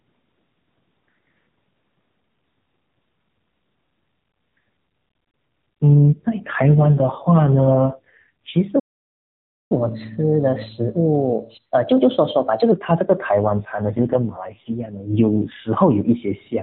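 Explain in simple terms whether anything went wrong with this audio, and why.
AMR rate drop, from 6.05 to 8.55 s and again from 13.39 to 15.70 s: the speech turns rougher, buzzier and more synthetic, though it stays just as narrow and never cuts out. On a mobile call, when the radio link weakens, the network tells the phone's speech codec to describe the voice with far fewer bits and use the spare capacity to protect against errors. The voice comes back to its normal quality once the link recovers.

Playback stall, from 8.79 to 9.72 s: the sound stops in mid-flow for about 0.9 s, then carries on. The player most likely ran out of audio to play, because data arrived late or its processing was held up. It had nothing to output, so it stayed silent until enough audio reached it again.

Catch-up at higher speed, from 9.72 to 12.72 s: right after the silence, the speech runs about 1.1 times faster and sounds roughly a semitone and a half higher. 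The player is working through the audio that piled up during the stall. It speeds everything up slightly to regain some of the lost time, then returns to normal speed and pitch.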